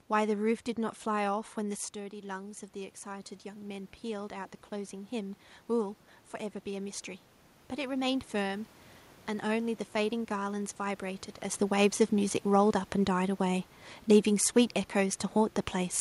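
Speech, with automatic gain rising from 1.3 to 6.06 s: after the voice drops about 9 dB as the talker moves back around 2 s, the gain climbs about 7 dB. Unlike the talker simply moving, the room noise swells along with the voice.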